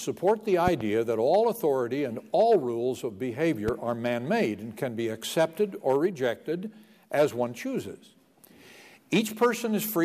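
A loud pop pair lands between 0.68 and 0.83 s: two sharp thumps in quick succession. A single loud pop follows from 3.68 to 3.71 s. Each peaks about 10 dB above the sound, which continues underneath. A sudden voltage step, likely from a plug, switch or static discharge, caused them.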